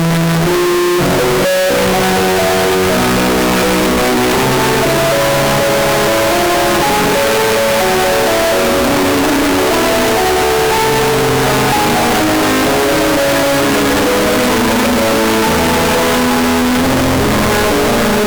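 Throughout, the audio is a harsh, blaring, near-square roar at an almost fixed, high level, with background noise as loud as everything else. The likely cause is a float read as integer fault: 32-bit float samples decoded as 32-bit integers, so sign and exponent bits set each level.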